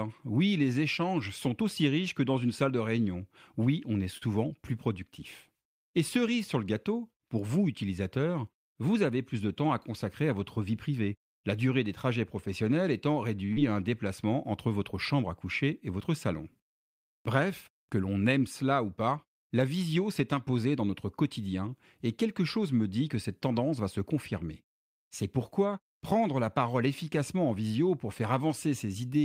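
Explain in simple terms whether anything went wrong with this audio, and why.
Twice a sound is held on too long: at 4.17 s, and at 13.46 s just after "des trajets professionnels étant". Each is a short stall from a late packet. A piece of audio arrived late, so the receiver stretched the last sound, by 40 ms and then 30 ms, until the piece came in. Nothing was lost.

From 8.95 to 9.35 s, between "gâteau pour vous utilisateurs" and "de temps à consacrer", the speech runs at about 108% speed with no change in pitch. This is a jitter buffer speed-up: too much audio had piled up, so the receiver trimmed out a few hundredths of a second to catch up.

Right after the second stall, at 13.53 to 13.58 s and before "à un déplacement entre", there is a short concealed packet loss. About 40 ms of audio never arrived in time. The receiver filled the gap by carrying the previous sound forward, which comes across as a brief smear.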